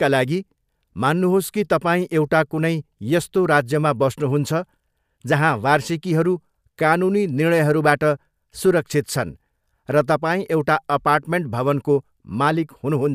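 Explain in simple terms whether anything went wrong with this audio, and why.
Nothing went wrong with this recording of speech. There is no moment in it where a technical fault can be heard.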